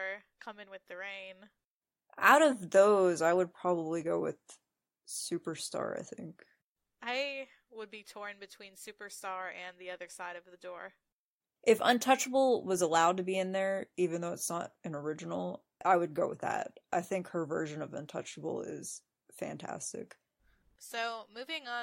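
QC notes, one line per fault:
No faults detected on this pass; nothing to log.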